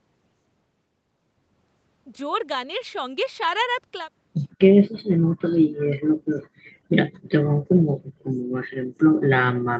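It's a speech recording with two short bursts of faint echo leak, at 4.50 to 4.57 s and 7.13 to 7.22 s. Each is a ghostly repeat trailing the speech by 156 ms, sitting very low, around 35 dB down. The likely cause is a far end on loudspeaker whose echo canceller let a scrap of our own audio slip back down the line. The band tops out at 8 kHz throughout, as you'd expect from the call path.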